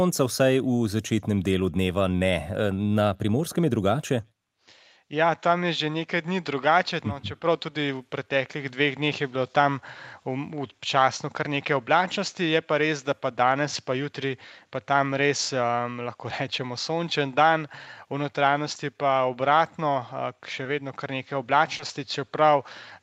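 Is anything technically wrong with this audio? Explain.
Yes. There is short concealed packet loss at 20.63–20.67 s and 21.77–21.81 s. Each time about 20 ms of audio failed to arrive, and the receiver bridged the hole by extending the preceding sound before blending back, giving a brief smear or wobble rather than the silent gap of a plain dropout.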